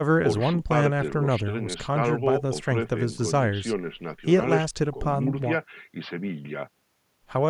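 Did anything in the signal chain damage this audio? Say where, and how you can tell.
No, nothing in this speech recording stood out as damage from any stage of the chain when I listened to it.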